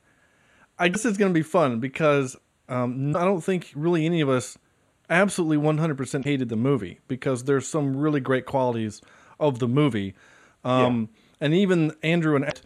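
Damaged data in a compressed stream causes brief glitches lasting about 56 ms at 0.90–0.96 s before "is going to be", 3.10–3.15 s before "I don't think really", 6.21–6.26 s before "the movie because there's", and 12.48–12.53 s, where corrupted frames make the decoder lose sync and resynchronise.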